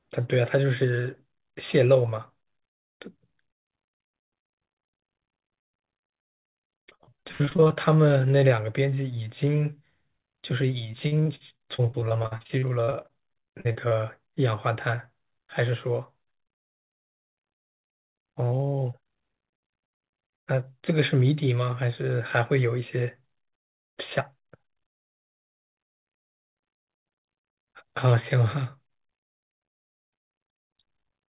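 Repeated packet loss (robotic sound) strikes twice in this speech. Packets kept going missing or arriving late, and each hole was patched by stretching the last fragment before the next loss arrived. From 6.48 to 7.72 s, concealment fills roughly 38% of the stretch, with gaps up to 81 ms. From 10.92 to 13.93 s it is sparser, about 22%, with gaps up to 59 ms. Both passages sound choppy, with pieces missing, over the narrowband call audio that stops at 4 kHz.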